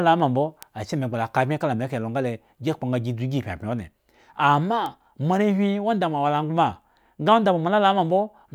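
At 0.63 s and again at 4.86 s the speech carries a bit error spike: a single flipped bit throws one sample out of line, reaching about -10 dBFS and then about -16 dBFS, before it snaps straight back. Each is a lone, broadband tick unrelated to the speech, with no gap or smear around it, unlike a dropout.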